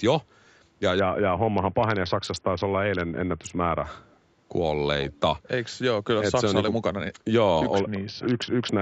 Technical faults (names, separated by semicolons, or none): Bluetooth SBC bit pool drop; echo leak